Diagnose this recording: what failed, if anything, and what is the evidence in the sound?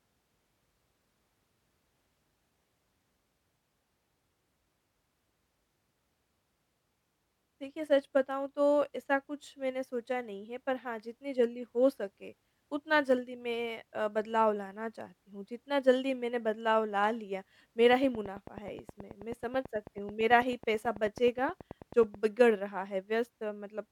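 Interference, a faulty connection or a power supply fault likely pulsed the analogue path, producing a train of clicks: about forty regular ticks at 9.25 per second, 17.93 to 22.15 s, reaching about 5 dB above the speech.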